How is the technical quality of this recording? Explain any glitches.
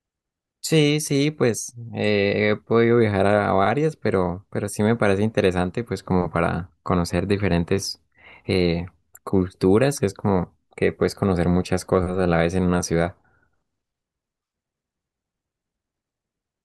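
Nothing stood out on listening to this speech recording, and there are no glitches to explain.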